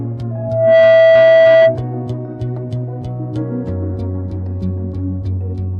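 A microphone caught the loudspeaker it fed: loudspeaker feedback squeal, a 655 Hz tone swelling within half a second from 0.31 s and dominating until 1.82 s.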